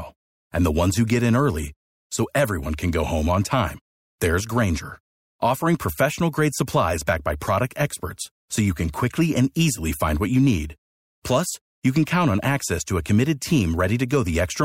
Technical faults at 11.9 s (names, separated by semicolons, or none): none